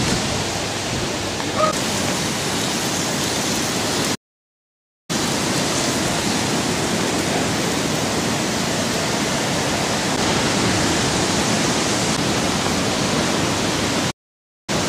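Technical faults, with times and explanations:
4.14–5.10 s and 14.10–14.70 s, playback stall. The sound cuts out mid-flow for about 0.94 s, then about 0.57 s, before resuming. The player likely ran short of data or its thread was blocked, so output fell silent until it recovered.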